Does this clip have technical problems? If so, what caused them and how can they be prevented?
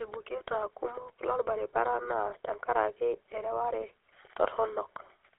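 Yes. GSM full-rate codec damage runs through the whole speech clip as a plainly audible buzzy, gravelly roughness, consistent with the 13 kbps full-rate coder. It rebuilds the vocal tract from coarse parameters and drives it with sparse pulse excitation. A spectrogram shows a hard band between 300 Hz and 3.5 kHz with smeared harmonics. Prevention: use a wideband or modern codec such as AMR-WB or EVS instead of full-rate GSM.

Lost GSM frames cause a brief rough, metallic ring from 2.30 to 2.33 s, just before "tenkaraki ereware". About 20 ms of audio went missing, and the decoder filled the gap by repeating the last good frame's settings. The waveform shows one repeated cycle pattern, and the spectrogram shows a frozen harmonic smear. Prevention: improve radio coverage or add stronger error protection and retransmission so frames arrive intact.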